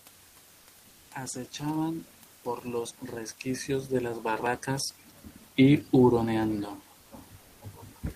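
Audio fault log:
6.99–7.11 s and 7.41–7.61 s: comfort noise in place of the background. The sender likely stopped transmitting during these pauses under Opus discontinuous transmission, and the receiver filled the 120 ms and 200 ms gaps with generated noise. The room noise, about 30 dB below the speech, loses its texture in both gaps, becoming a flat, featureless hiss about 2 dB quieter, then returns when the audio resumes.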